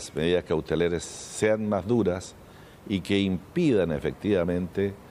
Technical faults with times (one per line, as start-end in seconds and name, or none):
none